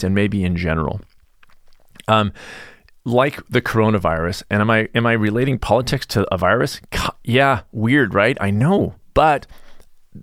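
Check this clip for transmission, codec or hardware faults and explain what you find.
No faults can be heard in the recording. Nothing in the sound points to a problem anywhere along the chain.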